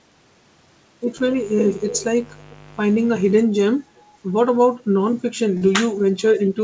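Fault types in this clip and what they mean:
Mains buzz: From 1.17 to 3.43 s a steady, raspy buzz sits under the speech, roughly 20 dB quieter than it. Sharp switching spikes from the 50 Hz supply leaked into the signal twice per cycle. On a spectrogram this shows as evenly spaced horizontal lines at multiples of 50 Hz, stacked up to several kHz and stopping at the 8 kHz ceiling of the call path. The waveform shows a fine, regular spiky ripple riding on the speech.
Short concealed packet loss: Around 5.57 to 5.64 s about 30 ms of the call never reached the decoder. The receiver covered the gap by extending the preceding sound for roughly 39 ms and then blending back into the real audio. The result is a brief smear or wobble. On a spectrogram the harmonics or noise just before the gap run on unnaturally flat and unchanged. The waveform shows a short stretch that carries on the sound before it, followed by a crossfade.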